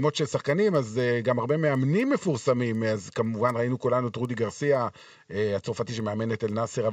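Resampler restarted on every block, throughout: each 250 ms block was converted alone, corrupting its edges, so ticks recur four times a second with signal.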